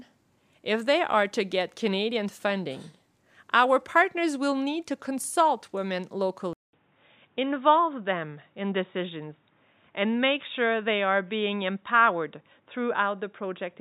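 At 6.53 s the speech drops out for about 200 ms, then comes back dull and boxy, with nothing above 3.8 kHz, through to the end. The level holds steady, but a faint new background noise sits well below it. That's likely an input switched to a poorer device.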